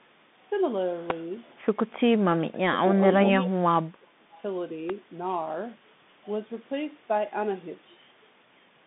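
Bluetooth CVSD headset codec damage runs through the whole clip and is plainly audible. The sound points to the 64 kbps CVSD headset link, where each sample is coded as a single up-or-down step whose size adapts. The line band sits at roughly 150 Hz to 3.6 kHz, and nothing above 3.8 kHz survives, so the speech is narrow and boxy. Sibilants turn scratchy, loud bright sounds overrun the step size and distort, and a grainy hiss sits underneath.

An electrical switching spike lands at 1.10 s as a brief, sharp snap on top of the audio. The likely cause is a nearby switch, motor or static discharge arcing briefly and coupling into the line. A second snap of the same kind comes at 4.90 s, even shorter and just as abrupt.

Speech suppressed in double talk shows up from 2.30 to 2.84 s, where the voice sinks by about 25 dB, and again from 3.36 to 4.34 s, where it drops by about 30 dB for roughly a second. 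Both talkers were likely speaking at once, so the echo canceller could not tell the local voice from loudspeaker echo and pulled everything down. The voice thins and fades in patches.

An echo leak follows immediately, from 4.34 to 4.40 s, as a faint scrap of delayed voice about 30 dB below the speech and arriving 408 ms late. This is likely the far end's loudspeaker output getting past its echo canceller and returning down the line as a short copy.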